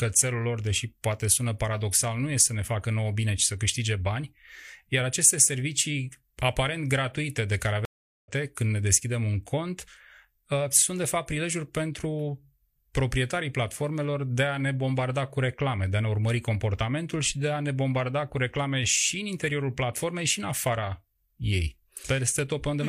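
At 7.85 s a stream reconnect occurs: the connection drops, the player reconnects and restarts its decoder mid-stream. After "aparent gratuite de care" the speech goes silent for about 0.39 s, then resumes roughly half a second later in the stream at "când ne deschidem un", fading in.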